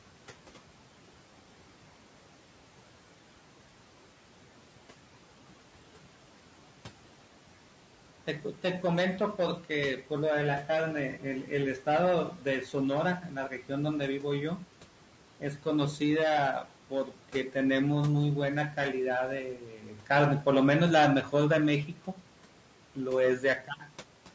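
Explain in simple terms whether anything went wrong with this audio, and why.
Noise suppressor artifacts run through the whole clip. A processor keeps turning down anything it judges to be steady background noise, so the hiss drops in the pauses and rises again under the talking.

Low-delay AAC compression is the likely cause of the rough, grainy texture heard throughout. This codec, built for video calls, works in very short chunks that can't capture the pitch of a voice cleanly, so noise creeps between its tones and the top end sounds artificial.

Speech cut by the noise suppressor happens at 8.27–8.64 s, 10.67–14.63 s, 15.4–16.01 s, 16.64–17.55 s, 19.56–20.46 s, 21.23–22.24 s and 22.95–23.92 s. The suppressor mistook quiet parts of speech for background, so soft consonants and word endings get swallowed or fade, and the cuts go deeper later on.

AAC frame loss with concealment occurs at 11.12–11.17 s, inside one of those dips. 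A piece of audio about 30 ms long went missing, which fits a single lost frame. The decoder patched it by guessing from the sound just before, leaving a brief smeared, noisy blip.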